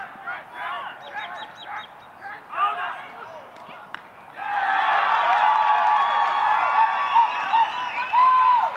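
Nothing stood out as a technical fault anywhere in this audio on listening.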